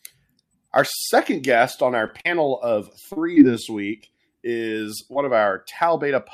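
Speech runs through three network-related faults in close succession. From 2.07 to 3.38 s there is repeated packet loss with a robotic sound. Four holes arrive close together, the longest 39 ms, and each is bridged by extending the last sound, about 100 ms of concealment in all. Because the patches follow one another so quickly, the voice turns choppy. Isolated dropouts would leave it clear between hiccups. Overlapping the end of that stretch, from 3.18 to 4.32 s, comes a jitter buffer slow-down. The receiver repeats single pitch periods to rebuild its reserve, adding 39 ms and running the speech at 97 % speed. What sets it apart from concealment is that nothing drops out. The pitch stays put while sounds are drawn out slightly, and the effect is a mild stretching rather than a tick or a buzz. Finally, between 4.57 and 5.28 s there are scattered short gaps. Roughly three lost packets, each well under 20 ms, are patched with around 50 ms of continued sound. 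The speech stays mostly clean apart from brief ticks and smears. Unlike the earlier robotic passage, the holes are spread apart, so they never run together into a continuous mechanical texture.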